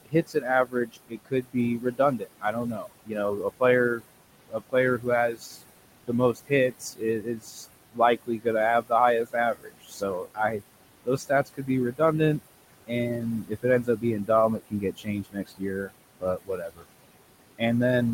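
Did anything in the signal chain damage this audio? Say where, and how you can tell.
Yes, the call-processing stage did it. The noise suppressor leaves artifacts across the whole clip. The room noise sits about 13 dB under the speech, and the suppressor pulls it down by about 21 dB, frame by frame, in the bands it judges to be steady noise. You hear the background sink in the gaps and swell back under the speech.

The same suppressor is also eating speech, mistaking quiet parts for noise and dropping them by about 21 to 22 dB. It happens at 0.0–3.62, 3.96–4.06, 4.48–5.59, 6.07–8.46, 8.81–8.91, 9.24–10.62, 11.04–12.01 and 12.87–16.85 s. The longest stretches lose well over a second in total, and the short ones lose a tenth of a second each. Soft consonants and word tails get swallowed or go faint, dipping in step with the background.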